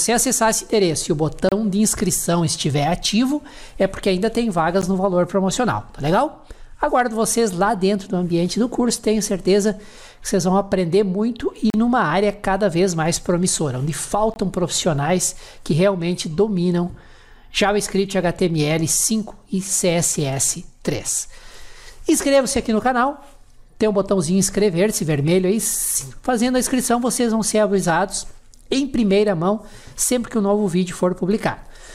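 Bluetooth stalls cut the sound to silence four times: about 30 ms from 1.49 s, a brief 13 ms gap at 4.82 s, about 38 ms from 11.70 s, and 20 ms from 14.34 to 14.36 s. Each time the audio drops out abruptly and then carries on. The likely cause is radio interference delaying packets until the headphones' small playback buffer emptied, holding output silent until the retransmitted data arrived.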